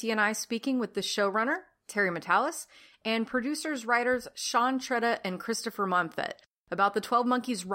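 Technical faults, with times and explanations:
No technical faults can be heard anywhere in this speech recording.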